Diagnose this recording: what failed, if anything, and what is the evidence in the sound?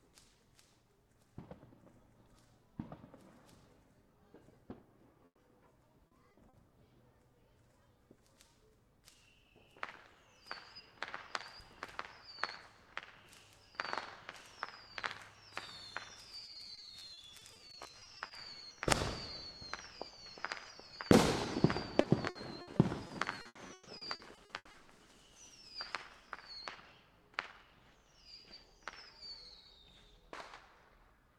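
The network stage failed, with a burst of packet loss at 5.25 to 5.39 s. The receiver patched a 120 ms hole by extending the last sound and fading it, and about 100 ms of that patch decays to silence before the audio picks up again 120 ms further along. On a waveform this shows as a tapering tail, then a flat stretch, then an abrupt restart. A spectrogram shows a smeared, fading column, then an empty band.

Repeated packet loss (robotic sound) also comes from the network, in three stretches. At 6.07 to 6.55 s there are 4 gaps totalling 120 ms. At 16.45 to 18.31 s there are 23 gaps totalling 480 ms. At 22.01 to 24.75 s there are 17 gaps totalling 740 ms, the longest 140 ms. Each time about a quarter of the span is concealment, so the sound turns choppy, with pieces missing. On a spectrogram these stretches look like a comb of short smeared or blank slices interrupting the texture.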